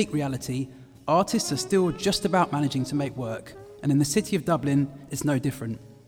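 No technical faults can be heard anywhere in this audio.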